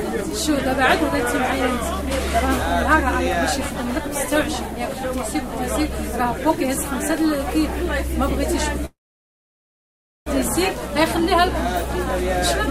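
At 8.85 s the sound stalls in a call audio freeze: the last bit smears into a brief fading tail, then about 1.33 s of silence until 10.28 s. Playback resumes where it left off, nothing lost, just 1.41 s late, likely from packets held up until the jitter buffer drained.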